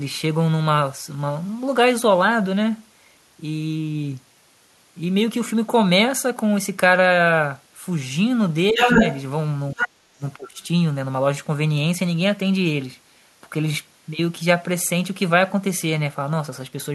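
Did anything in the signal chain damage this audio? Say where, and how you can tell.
Yes. The damage sits in call processing. The echo canceller was likely caught in double talk and responded by turning down the near talker along with the echo. This is speech suppressed in double talk. The speech dips slightly, by around 5 dB, at 8.72–9.0 s. It drops much harder, around 20 dB, at 9.73–9.95 s, and around 25 dB at 10.14–10.59 s. Each time, stretches of roughly 100 to 300 milliseconds sound ducked or partly cut out.

The same canceller also left residue behind. The other side's voice leaking through comes from loudspeaker sound that was likely not fully subtracted from the microphone signal. At 8.76–9.21 s the leak is strong, around 5 dB louder than the speech itself. At 9.77–9.89 s it sits somewhat below the speech. At 10.6–10.65 s only a very faint scrap remains, roughly 40 dB down, just as the suppression releases.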